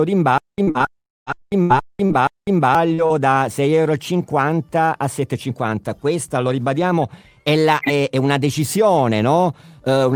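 From 0.38 to 2.75 s the same short burst of about 0.27 s returns five times, each followed by roughly 0.20 s of dead digital silence, a steady cycle every 0.48 s. This stutter with silent gaps is likely a stalled player re-sending its last buffered fragment on each retry while the intended audio is lost.

Inside that stretch, at 0.63 to 0.70 s and again at 0.71 to 0.78 s, come brief smeared wobbles. These are short concealed packet loss: about 40 ms went missing each time, and the receiver bridged it by extending the preceding sound before blending back in.

From 0.99 to 1.29 s the sound turns into a fading buzz or hiss that thins toward silence before the audio resumes, with that segment gone. This long network dropout, likely caused by roughly 280 ms of nothing arriving, was patched by stretching the last sound until it decayed.

Between 1.34 and 2.17 s the audio turns choppy. This is repeated packet loss (robotic sound): five separate holes totalling 160 ms, the longest 78 ms, each filled by continuing the previous sound, so about a fifth of the span is synthetic.

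At 2.94 to 3.01 s and 3.06 to 3.13 s two more quick smears occur. These are short concealed packet loss again, each bridging about 40 ms of lost audio.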